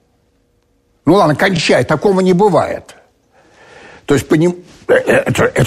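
At 1.56 to 1.59 s, repeated frames: a 24 ms block, consistent with one compressed frame, plays twice, adding 24 ms. It's heard as a brief stutter and appears as a duplicated spectrogram slice.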